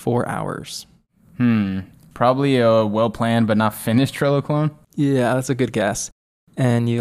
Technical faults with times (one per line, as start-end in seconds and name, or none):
1.29-1.31 overlapping chunks
3.81-3.84 overlapping chunks